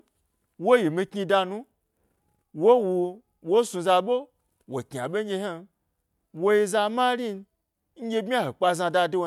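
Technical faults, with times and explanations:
Nothing stood out as a technical problem on listening to this speech recording.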